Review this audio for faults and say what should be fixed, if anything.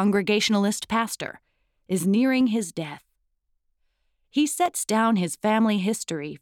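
Two devices are likely running on separate, unsynchronised clocks about 150 ppm apart, so the buffer between them drifts until a handful of samples is dropped or repeated. These clock drift buffer slips are heard as about seven regular clicks, roughly every 1.13 s from 0.16 s to 5.79 s. Lock both devices to a shared word clock, or add asynchronous sample-rate conversion at the interface.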